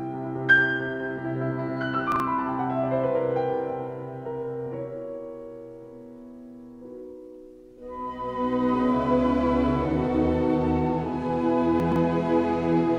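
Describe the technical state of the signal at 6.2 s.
Around 6.2 s the signal is intact, with no dropout, clipping, distortion or other fault to be heard at that point.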